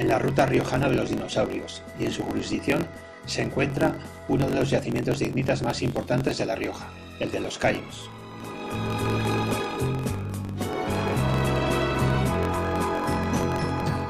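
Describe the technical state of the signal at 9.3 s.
At 9.3 s, as throughout, a block size mismatch (truncated) drops each block's tail, fitting 1024-sample writes, giving a 45.9 Hz buzz and 1.07x faster audio at near-normal pitch.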